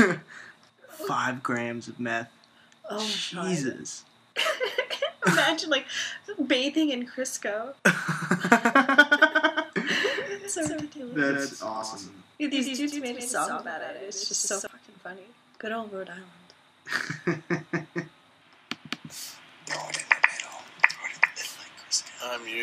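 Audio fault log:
8.13–14.67 s, doubled audio track: a dry, full-band copy trails about 150 ms behind at about 5 dB down, likely captured again through a slower path.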